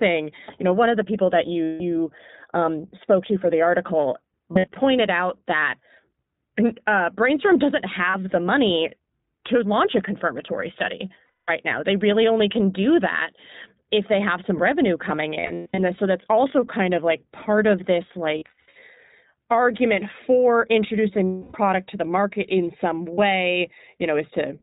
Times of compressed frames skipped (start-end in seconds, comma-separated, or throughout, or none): none